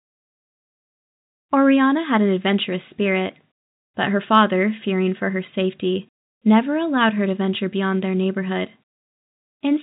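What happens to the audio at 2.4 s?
Nothing goes wrong at 2.4 s: the speech carries on intact through that moment, with only the usual narrow telephone bandwidth of the G.711 coding it passes through.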